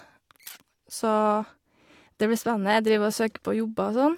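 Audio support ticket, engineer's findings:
Nothing to flag on this speech recording, so no component to chase and the ticket can be closed on our side.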